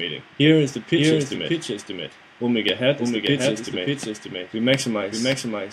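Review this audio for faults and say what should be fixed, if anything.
There's a doubled audio track throughout: a second, full-band copy trails about half a second behind, around 5 dB quieter, likely from a duplicate capture path or misaligned edit. Check routing and edits so the signal reaches the mix only once.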